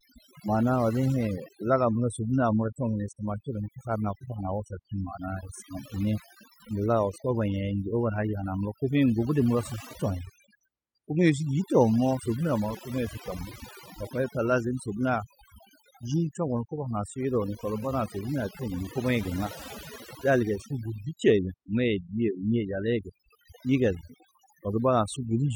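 Overdone noise removal runs through the whole speech clip. The noise reduction was set too strong. Frequency bands near its noise estimate are cut hard or removed, and quiet parts of the voice go too. Pauses fall to near silence with twinkling specks.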